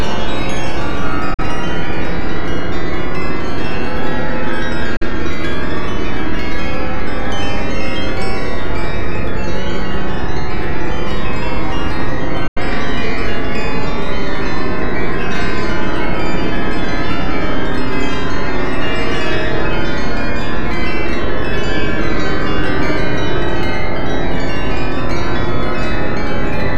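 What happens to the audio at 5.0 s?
A digital broadcast dropout runs from 4.96 to 5.06 s. The receiver mutes with an 8 ms fade, and 42.7 ms of sound is lost, consistent with one failed frame.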